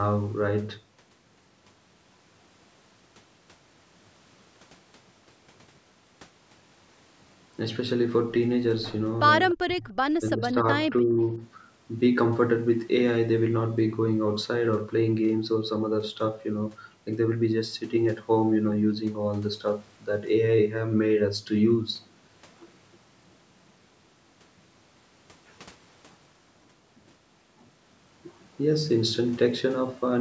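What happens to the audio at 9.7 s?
The speech drops out from 9.54 to 9.86 s, nearly vanishing. It is likely speech suppressed in double talk: the echo canceller could not separate the talker from the loudspeaker echo and turned both down.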